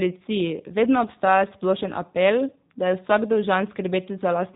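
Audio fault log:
Throughout, G.729 codec: the speech sounds plainly rough and slightly synthetic, with a thin, boxed-in quality because nothing above about 3.8 kHz comes through. The coder rebuilds each 10 ms frame from a vocal tract filter, a pitch predictor and a handful of pulses instead of sending the waveform, and the sparse excitation produces the buzzy graininess. The damage fits the G.729A variant running at 8 kbit/s.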